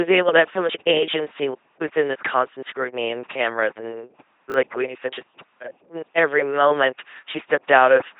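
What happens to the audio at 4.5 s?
Between 4.5 and 4.54 s, just after "scrutiny and cameras and" and before "what you said just", the chunks play out of order. A 20 ms chunk lands one chunk late and plays after the one meant to follow it. Unlike a dropout, nothing is missing. The result is a brief jumbled stutter with three hard joins.

The LPC-10 vocoder also shapes this moment, as it does the whole clip. At 2.4 kbit/s, each instant is rebuilt from either a buzz pulse train or noise through a short all-pole filter, with nothing above 3.8 kHz. That heavy, mechanical robot tone, flipping abruptly between buzz and hiss, separates it from plain band-limiting.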